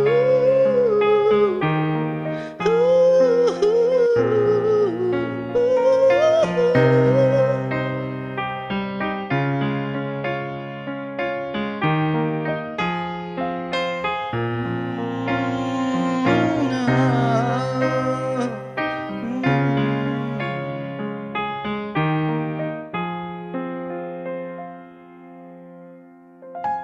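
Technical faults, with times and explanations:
No technical faults can be heard anywhere in this audio.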